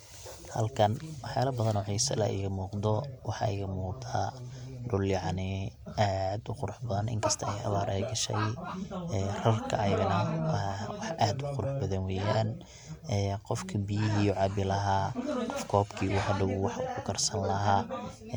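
No audible technical faults.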